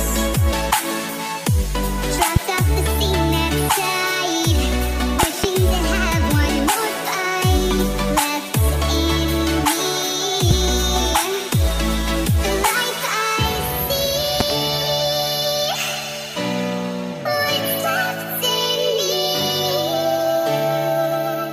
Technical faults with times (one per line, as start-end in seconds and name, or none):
2.36-2.39 loud pop
5.23-5.46 loud pop
10.51-10.54 loud pop
14.40-14.53 loud pop